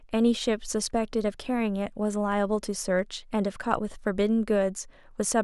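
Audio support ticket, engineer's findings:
Block size mismatch (truncated), throughout: block tails discarded between stages, likely at a buffer handoff. Result is a steady buzz at 43.1 Hz, fitting 1024-sample blocks. Speech plays at normal speed.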